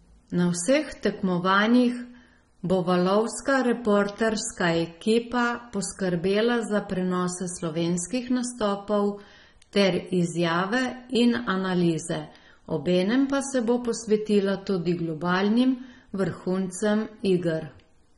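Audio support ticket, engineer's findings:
Dull, band-limited speech for the full clip, with nothing above 11 kHz. Plainly audible codec damage: smeared transients, warbling on sustained vowels, fizzy sibilants. Likely AAC compression, AAC-LC at a low bitrate consistent with about 24 kbps. The encoder lowered its cut-off and starved upper bands of bits. Coarsely quantised frequency lines produce the swirling texture.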